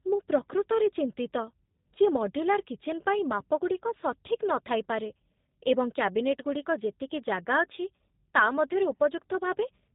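G.729 codec damage runs from start to finish and is plainly audible. The speech has been rebuilt frame by frame from a vocal-tract filter, a pitch predictor and a handful of pulses, which fits an 8 kbit/s G.729A coder. Everything above 4 kHz is gone, so consonants lose their crispness, and the pulse-based excitation leaves the voice sounding rough, buzzy and faintly synthetic throughout.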